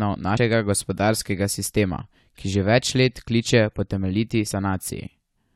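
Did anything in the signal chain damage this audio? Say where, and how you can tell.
Yes. At the codec stage, compressed frames were skipped: whole frames never reached the output, because they were either missing from the file or rejected by the decoder as damaged. This happens twice, at 0.36 s, just before "gospodarskega sistema ki že", and at 4.49 s. Each time the speech jumps ahead by roughly 100 ms, a few frames at 23.2 ms each.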